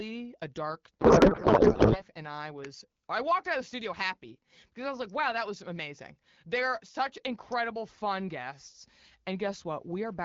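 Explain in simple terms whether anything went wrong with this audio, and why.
From 1.00 to 2.03 s, just after "a dark", a codec payload misread occurred: the receiver unpacked the voice data in the wrong layout, so the speech turns into garbled, warbling noise. At 2.65 s, before "I walked out of", and 7.52 s, before "fun guests", sharp snaps sit on top of the sound, electrical switching spikes likely picked up from nearby equipment.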